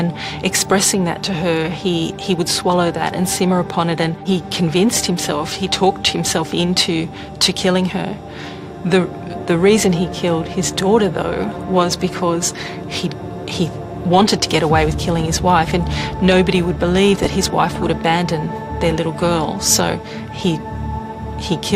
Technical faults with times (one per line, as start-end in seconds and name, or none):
17.17-17.91 DAB burbling